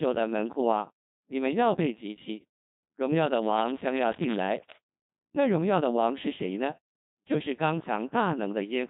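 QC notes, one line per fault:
Throughout, Codec 2 vocoder: the speech comes out robotic and buzzy across the whole clip, with heavy damage, and the sound points to a very low rate, which fits something around 2.4 kbit/s. The codec doesn't keep the waveform at all. It only sends pitch, voicing, energy and a rough spectral envelope, then the decoder rebuilds the voice from sine waves, so everything fine-grained in the original gets lost.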